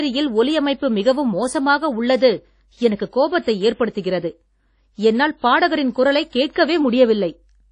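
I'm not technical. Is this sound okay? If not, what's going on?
No. The speech was most likely squeezed hard by WMA compression, a file-shrinking method that throws away detail. Throughout, the voice sounds washy and ringing, with a hiss that swells and fades along with it, and nothing above about 10 kHz survives, dulling the crisp edges.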